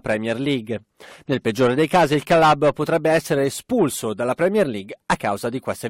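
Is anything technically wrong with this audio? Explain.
No, nothing technically wrong can be heard here.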